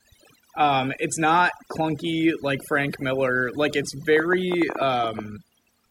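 Overdone noise removal, throughout this speech recording: the suppression pushes bands near the estimated noise floor almost to silence, leaving sparkling specks in pauses. Train of clicks, from 4.17 to 5.2 s: about ten sharp, similar pulses at uneven spacing, averaging 10.7 per second and peaking around 10 dB above the speech, likely from electrical interference or a faulty connection.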